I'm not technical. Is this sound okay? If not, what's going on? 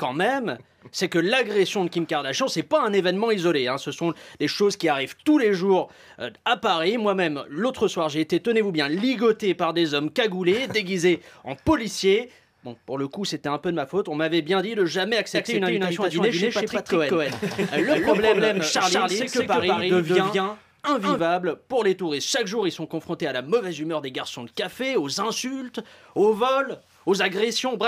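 No. From 15.35 to 21.19 s the sound plays twice at once: a second, equally loud copy trails the first by about a fifth of a second, so everything gets a stuttering echo. This is a doubled audio track, where the same audio ends up in the mix two times out of step. The likely cause is that it was recorded a second time through a slower route, or that an edit left two copies overlapping. The echo switches on and off abruptly at those times.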